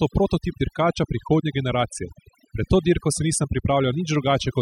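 Overdone noise removal runs throughout the speech: an overly aggressive reducer gates bands near its noise estimate, leaving twinkling specks in near-silence and taking quiet parts of the voice with them.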